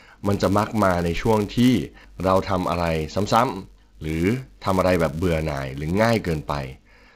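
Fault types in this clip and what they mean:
Filter restarted on every block: a buzz at 188 Hz sits under the speech throughout, swelling and fading with its level. The filter loses its state at each block edge, so every block starts with a tiny click, at a rate that fits 256-sample blocks.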